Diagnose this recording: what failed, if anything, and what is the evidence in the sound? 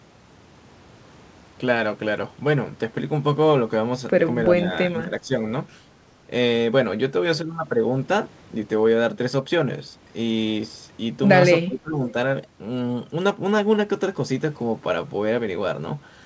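Call processing is where this went wrong: speech suppressed in double talk. The speech dips by about 5 dB at 4.58–4.71 s, about 10 dB at 4.88–5.41 s and a deep 25 dB or so at 11.66–12.14 s, likely the echo canceller ducking this talker while the far end spoke.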